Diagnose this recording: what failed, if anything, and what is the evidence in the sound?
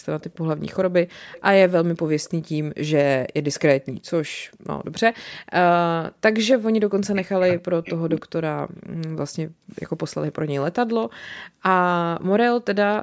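Echo leak at the call-processing stage: a faint, delayed copy of the speech surfaces at 0.20–0.37 s, 1.33–1.42 s, 2.24–2.30 s, 3.54–3.92 s, 4.94–5.00 s and 8.16–8.21 s, each trailing its source by 272 ms and sitting roughly 25 to 30 dB below the direct speech. The likely cause is a far-end echo canceller that let residual loudspeaker pickup through. On a spectrogram, these appear as dim, shifted repeats of the preceding speech harmonics, capped at 8 kHz like the rest of the call band.

Background gated by the echo canceller, also at the call-processing stage: at 4.45–4.67 s the room sound drops by about 40 dB for roughly a fifth of a second, then returns. The canceller's suppressor clamped the microphone while the loudspeaker played and released it afterwards. On the waveform the noise floor collapses almost to silence with abrupt edges. A spectrogram shows a clean vertical band where the broadband background vanishes across all frequencies.

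Speech suppressed in double talk: between 6.99 s and 8.28 s the talker's speech dips and breaks up in pieces, totalling about a second, with drops reaching around 40 dB. The likely cause is the echo canceller failing to separate local speech from loudspeaker echo while both sides talked, so it attenuated everything. On the waveform the envelope is punched into ragged gaps. The spectrogram shows harmonics fading or cutting out.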